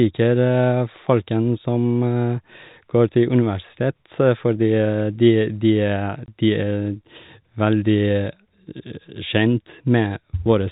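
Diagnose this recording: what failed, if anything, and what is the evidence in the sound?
Packet loss filled with silence at 6.26 to 6.28 s, a network fault. One 20 ms packet never arrived, and the receiver played digital silence in its place, so the speech drops out abruptly with hard edges. Through the G.711 telephone coding, the band stays capped at 4 kHz.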